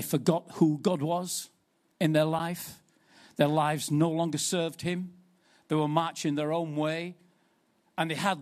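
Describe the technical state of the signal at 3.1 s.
At 3.1 s the speech signal is intact, with no dropout, click, distortion or other fault at that moment.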